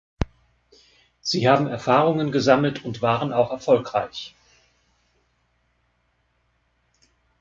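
Nothing in the speech stood out as a fault on listening.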